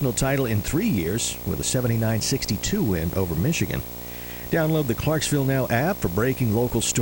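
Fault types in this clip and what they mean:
video or display buzz: a screen or video cable is coupling into the audio path, laying a buzz at the 59.94 Hz field rate, with hash above it and a thin 15.7 kHz line-rate whine, under the speech throughout, roughly 10 dB below it.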